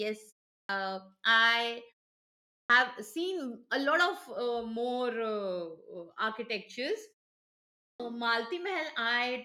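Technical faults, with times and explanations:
0.60–0.69 s, 2.60–2.70 s and 7.90–8.00 s, clipped start after a pause: each time speech resumes after silence (pauses of 0.36, 0.75 and 0.84 s), it bursts in abruptly with its opening sounds missing, as just before "seen a lot". About 92, 97 and 96 ms are lost. The output device drops into a low-power state during the pause and has not fully woken when sound returns, so the first fraction of each phrase is swallowed.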